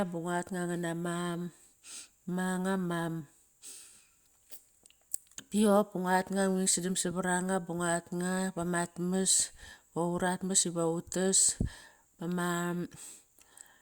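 No technical faults are audible.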